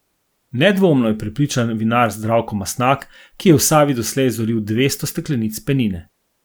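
No technical faults can be heard anywhere in this speech recording. There is nothing in the audio that calls for a time mark or a repair.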